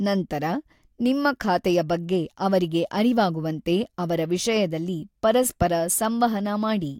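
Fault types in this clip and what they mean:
Loud pop: a single sharp pop at 5.62 to 5.64 s, standing around 10 dB above the speech, which carries on underneath without a gap. This sets it apart from a dropout or cut, and a likely sudden voltage pulse from a plug, switch or static caused it.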